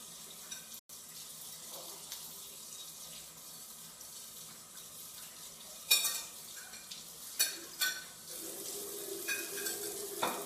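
At 0.79 s the sound drops out to dead silence for about 0.1 s, coming back at 0.89 s. That's most likely a Bluetooth stall, where interference held up packets, the headphones' buffer ran dry, and playback paused until the resent data arrived.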